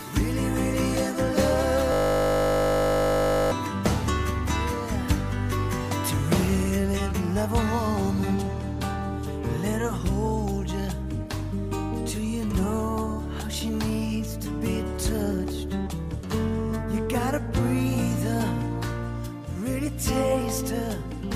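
From 1.92 to 3.52 s, a system hang loop replays one 20 ms buffer as playback freezes, producing a 50 Hz buzz: identical waveform cycles and stacked harmonic lines every 50 Hz.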